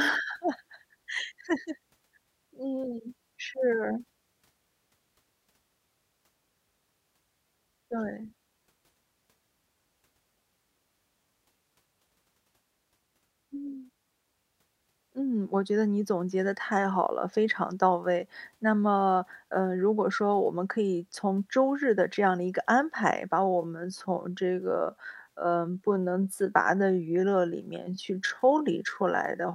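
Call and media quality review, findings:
Time-stretched section, 23.38 s to 29.54 s (end): speech abruptly slows to about 0.71x pace, pitch unchanged. Short segments repeated to fill length. Likely a time-scale modification stage padding audio to a target duration. Distinguishing point: a plain playback-rate or resampling slowdown would drop the pitch along with the tempo. Here the pitch holds steady, so this is stretching and not a rate mismatch.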